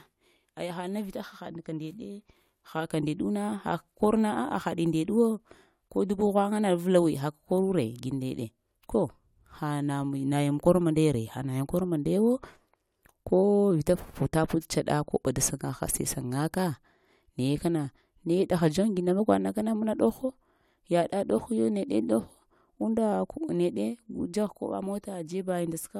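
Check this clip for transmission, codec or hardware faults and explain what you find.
No faults of any kind can be heard here.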